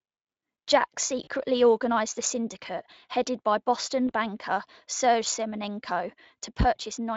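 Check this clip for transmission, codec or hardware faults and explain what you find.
There are two brief dropouts here, both VoIP packet loss concealed by the speech codec. The first runs from 1.23 to 1.28 s, just before "organized a", and lasts about 40 ms, which fits two lost 20 ms frames. The second, at 4.07 to 4.11 s, is about 20 ms, so roughly one frame. The decoder covers each gap by extrapolating its last pitch and filter at falling gain, so you hear a short buzzy tone or coloured noise that fades, with the voice weak or distorted just afterward. The light Speex colouring is present throughout.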